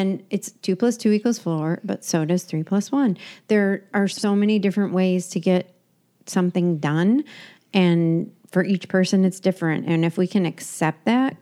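Just after "plus one there are", from 4.12 to 4.24 s, frames out of order: two adjacent runs of about 52 ms swap places, giving a garbled flutter before "many different ways to".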